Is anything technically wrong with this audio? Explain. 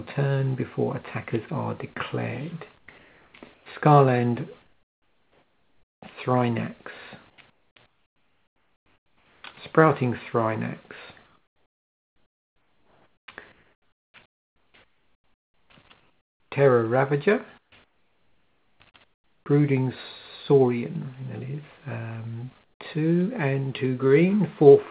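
Yes. The background is repeatedly replaced by comfort noise, at 2.78–3.66 s, 4.62–6.02 s, 7.3–9.44 s, 11.26–15.7 s, 16.0–16.52 s, 17.58–19.46 s and 22.64–22.8 s. The likely cause is discontinuous transmission: the sender stops sending during pauses, and the receiver fills each gap with synthetic noise shaped roughly like the background. The real ambience gives way to a smoother, more uniform hiss, which is about 10 dB quieter at 4.62 s and 22.64 s and about 5 dB quieter at 16.0 s. On a spectrogram, each pause shows an even, textureless noise band with sharp edges. On a waveform, the floor steps to a steadier level. The call path leaves nothing above 4 kHz, which fits 64 kbps G.711 mu-law.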